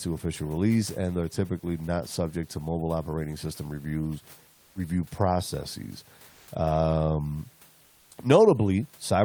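At 4.53 to 4.75 s, between "mobile operating system reviews" and "review processes", at 6.29 to 6.47 s after "system reviews review processes", and at 7.85 to 8.11 s, the room noise is swapped for comfort noise in place of the background, likely from discontinuous transmission such as Opus DTX. The textured room hiss turns steady and featureless, about 6 dB quieter, then about 2 dB louder, then about 1 dB quieter. Unlike a gate or dropout, the pause never falls to silence.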